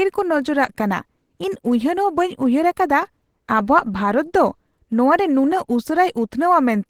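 Speech clip carrying plainly audible Opus compression throughout: hoarse, grainy texture without MP3-style swirl, likely from hybrid mode at a low rate fitting about 16 kbps, despite content reaching 20.2 kHz.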